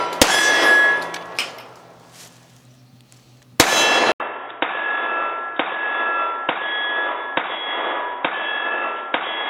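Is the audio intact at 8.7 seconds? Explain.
No. From 4.12 s to the end, the sound turns dull and boxy, likely because the input switched to a poorer device. A spectrogram shows everything above 3.8 kHz cut flat; the waveform shows an 80 ms gap, then a slightly lower level with faint new noise.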